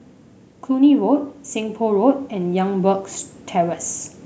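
From 0.67 s to 3.85 s the automatic gain rising fault shows up: the level control decided the input was too quiet and eased its gain up by about 6 dB across those three-odd seconds. The speech grows steadily louder, and the room noise underneath swells right along with it. That shared rise is the giveaway. A talker leaning toward the microphone would lift the speech far more than the background, and a compressor pumping would rise and fall in quick cycles.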